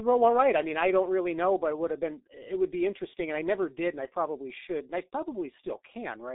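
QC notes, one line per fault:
Throughout, G.723.1 codec: the speech sounds muffled, hoarse and thin, with consonants smeared and sibilants dulled. The audio is confined to a telephone band of roughly 250 Hz to 3.7 kHz, with nothing at all above 3.8 kHz. The heavy coding damage and slow-changing voice model point to G.723.1 at about 6.3 kbit/s. Its 30 ms frames update the vocal-tract estimate too coarsely to follow quick articulation, which produces the rough, blurred texture.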